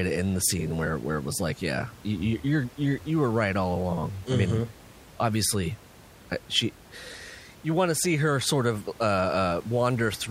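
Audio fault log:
No faults are heard in this speech recording. Some room noise sits in the background, about 23 dB below the speech, as part of the original recording.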